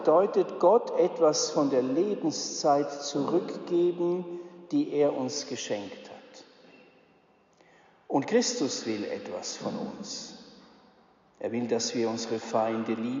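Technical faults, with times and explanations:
Nothing technical stands out here; the audio runs along without any glitches, dropouts or odd artefacts worth pointing to.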